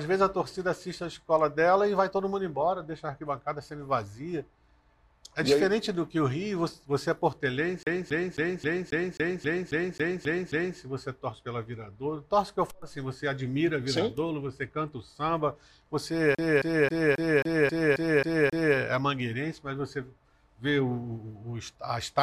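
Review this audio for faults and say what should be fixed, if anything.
The CD stuck on one turn hits twice, from 7.83 to 10.78 s and from 16.35 to 18.77 s. A scratch keeps kicking the laser back a track, so the same 0.27 s chunk loops 11 and then 9 times, with a tiny mute at each jump. Rip with a secure, error-checking ripper from a cleaned disc.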